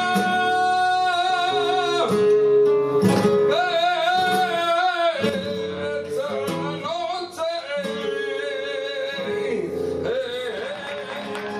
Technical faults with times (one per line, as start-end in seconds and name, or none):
5.29-11.60 sudden gain jump